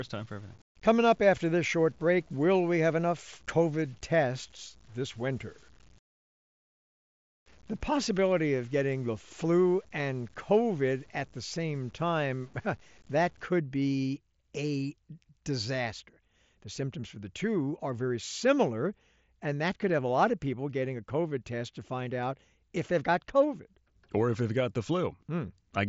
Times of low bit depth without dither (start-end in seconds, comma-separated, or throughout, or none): 0.00-13.46